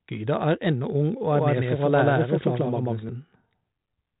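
From 1.31 to 3.09 s an equally loud, dry copy trails the speech by about 150 ms: a doubled audio track, likely from a slower second capture path.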